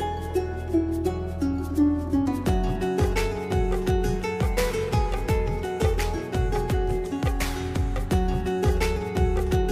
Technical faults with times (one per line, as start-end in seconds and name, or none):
none